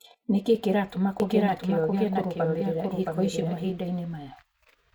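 From 1.2 s to 3.7 s the speech is accompanied by a doubled audio track: a second, somewhat quieter copy trails by roughly 0.7 s, full-band and dry, cutting in and out abruptly. This likely comes from a slower capture path feeding the mix twice.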